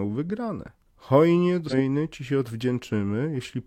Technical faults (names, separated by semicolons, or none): damaged data in a compressed stream